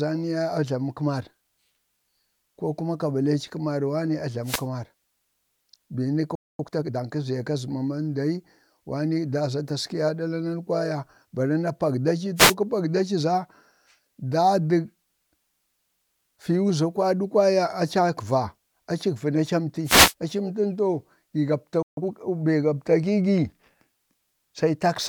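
A wireless microphone noise hit at 4.42–4.66 s lays a short swish of static over the speech. The FM radio link fades as reflections cancel, so receiver noise rises through the signal.

A playback stall at 6.35–6.59 s drops the speech to silence for 0.24 s, likely because the player ran out of data. Time-compressed catch-up follows from 6.59 to 7.05 s. The speech is hurried to 1.5 times speed at unchanged pitch, as small pieces are cut and cross-faded away.

Further wireless microphone noise hits bring the same burst of static at 12.36–12.54 s and 19.84–20.14 s.

A second playback stall at 21.82–21.97 s silences the audio for 0.15 s, likely from a blocked player thread. A brief catch-up at 2 times speed then runs from 21.97 to 22.11 s.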